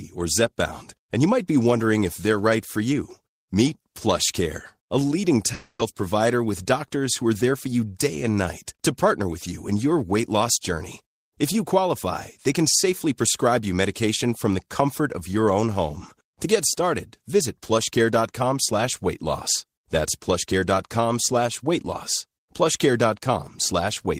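Speech, with a long network dropout at 5.53 to 5.81 s. For about 0.28 s no new audio comes through: the last sound is stretched into a buzzy, fading hiss for roughly 0.26 s, then about 30 ms of silence before speech resumes with that stretch missing. This is likely packet loss on the network path. A spectrogram shows smeared, repeating harmonics decaying into a brief blank gap, and the waveform shows a shrinking, periodic tail before the cut.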